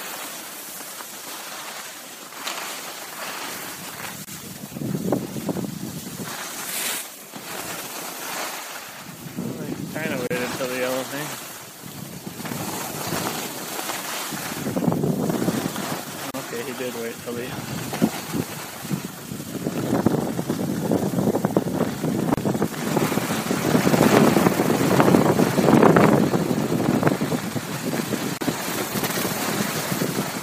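Gaps at joins of encoded pieces open at 4.25, 10.27, 16.31, 22.34 and 28.37 s, about every 6 s. Each lasts about 34 ms (the first 26 ms). Separately encoded pieces were joined without trimming their start delay and final-frame padding, so short silences with smeared edges interrupt continuous sound.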